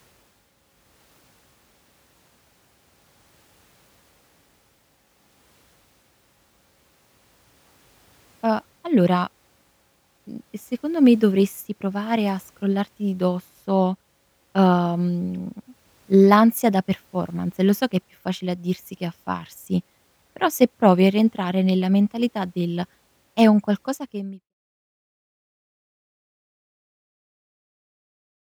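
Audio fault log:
No faults to log here; the one thing you'll notice is the level easing gently away from about 23.5 s until it's gone at 24.54 s, just an ordinary editor's fade-out.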